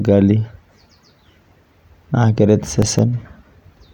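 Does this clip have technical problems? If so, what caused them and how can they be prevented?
Yes. Processor overload crackle from 2.79 to 2.99 s: several roughly 3 ms buffers missed, each leaving silence, so it tears briefly. Lighten CPU load or use bigger buffers.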